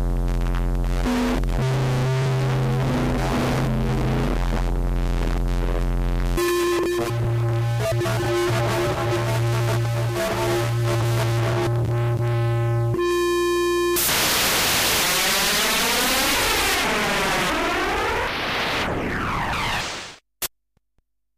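From the start to 14.97 s, a 60 Hz buzz with hash above it sits about 20 dB below the sound: video or display buzz, a screen or video cable coupling into the audio.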